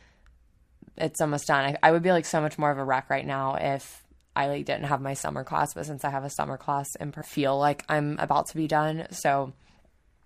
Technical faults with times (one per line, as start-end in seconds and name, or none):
7.21-7.26 stream segment skipped